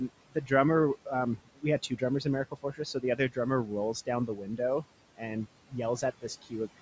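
Noise suppressor artifacts run through this whole speech clip: the suppressor pulls the steady room noise down by about 18 dB frame by frame. Speech cut by the noise suppressor occurs from 0.08 to 0.51 s, 1.05 to 4.85 s, and 5.68 s to the end, where quiet parts of the speech were mistaken for noise and dipped by up to about 19 dB. Across those spans roughly a fifth of a second, about a second, and about a third of a second sound swallowed or faint. The room noise sits about 16 dB below the speech, and the call's microphone processing leaves nothing above 8 kHz.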